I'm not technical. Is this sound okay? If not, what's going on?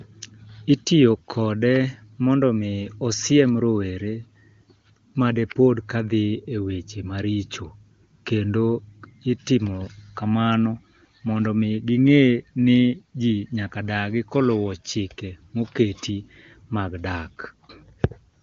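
Yes, nothing stood out on listening: this is speech sent over an HD Voice phone connection (the AMR wideband codec), and it comes across clear.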